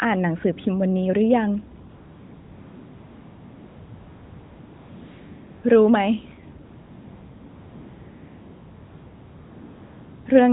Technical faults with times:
1.90-5.64 AMR comfort noise
6.66-10.26 AMR comfort noise

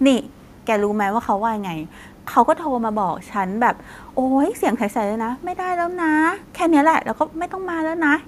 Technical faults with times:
none

